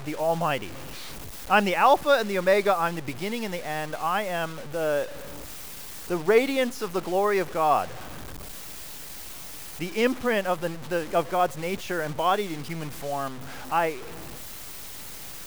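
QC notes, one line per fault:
Throughout: low bit depth without dither. The speech carries a grainy, rasping distortion that shifts with every syllable and sits only about 20 dB below the voice, while quiet tails sputter or drop out. This is likely truncation to around 6 bits without dither.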